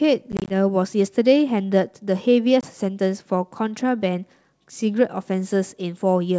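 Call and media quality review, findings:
Packet loss on an ADPCM call, 0.32 to 0.53 s: roughly ten packets lost as short hard-edged silent gaps, 90 ms lost across about 180 ms, longest run 20 ms. Resumptions come back slightly distorted, since the receiver's adaptive predictor and step size no longer track the sender's and need tens of milliseconds to converge. Second hit at 2.61 to 2.65 s: 20 ms lost, about two packets, same recovery artefact. Probable component: network/jitter path feeding the G.722 decoder, whose wideband band split still sounds clean between dropouts.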